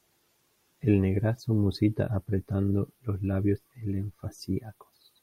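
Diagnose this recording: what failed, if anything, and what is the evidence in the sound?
Nothing failed in this recording, and the sound carries no evidence of a fault at any stage.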